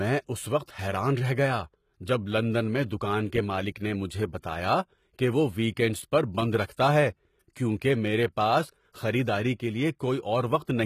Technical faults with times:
0.00-10.86 HE-AAC compression
0.64-0.67 pre-echo

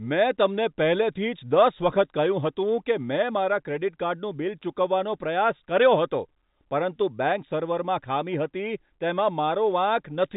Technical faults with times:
none

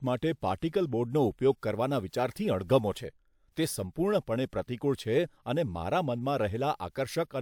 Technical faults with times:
none

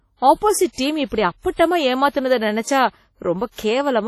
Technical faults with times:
0.00-4.07 WMA compression

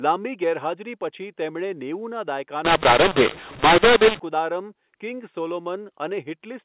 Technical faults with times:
2.65-4.19 mu-law and A-law mixed up

